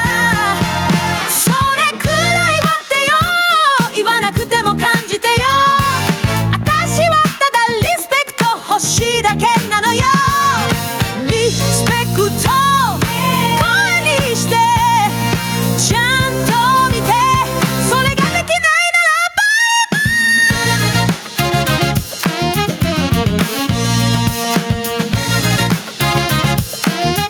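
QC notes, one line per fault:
Throughout, gain pumping: gain swings by roughly 10 dB as it is pulled down on each loud sound, likely excessive gain driving a fast limiter.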